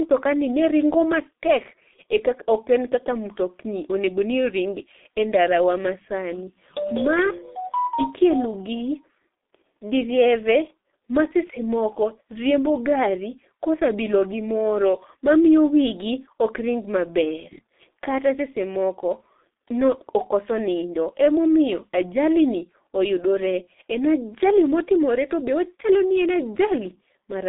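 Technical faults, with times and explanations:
Throughout, G.723.1 codec: the speech has gone through a low-rate telephony codec that slices it into 30 ms frames and rebuilds each from a coarse, slowly updated model of the voice, at a rate consistent with about 6.3 kbit/s. The line band runs only from 250 Hz to 3.7 kHz, so nothing above 3.7 kHz survives. The damage is heavy: the voice is muffled, thin and hoarse, and consonants smear into one another.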